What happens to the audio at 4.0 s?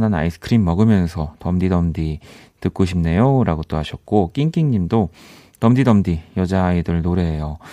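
Nothing goes wrong at 4.0 s: the speech carries straight through that moment with no dropout, click or other audible fault.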